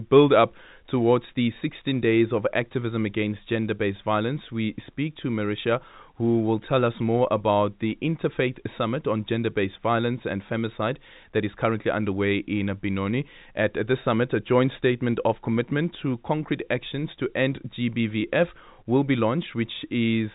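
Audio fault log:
Nothing's going wrong in this speech clip; it just has the narrow, phone-line sound of G.711 telephone coding, with nothing above about 3.8 kHz coming through.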